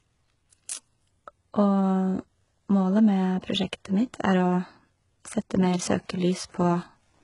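From start to finish the speech sounds dull, with nothing above 11 kHz and the artefacts of a very aggressive encoder, despite being carried in what fits a generous 256 kbit/s MP3. This is low-bitrate audio saved at a high bitrate: the character points to an earlier HE-AAC pass at around 12 kbit/s, likely re-encoded later. The second encoding could not bring back the detail and bandwidth the first had already discarded.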